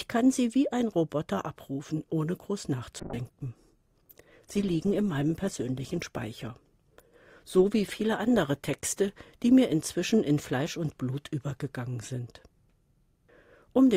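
From 3.0 s to 11.03 s the call goes through a bitrate drop. Its bandwidth estimate collapsed, and the encoder was pushed from 128 kbps down to 16 kbps, holding that floor for about 3.2 s. With so few bits the codec quantises coarsely and discards the upper band, so the sound goes muffled and watery, with a rough, smeared texture, before clarity returns as the bitrate climbs back.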